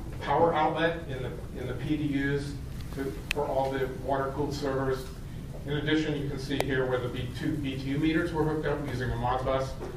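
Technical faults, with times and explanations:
3.31 s and 6.61 s: electrical switching spike. Each is a single sharp snap laid over the sound, peaking at about -10 dBFS and lasting only a couple of milliseconds. The likely cause is a nearby switch or motor arcing, with the line picking up that burst.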